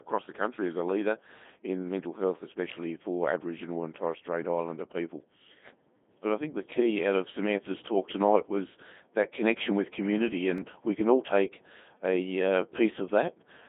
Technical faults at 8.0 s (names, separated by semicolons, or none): Codec 2 vocoder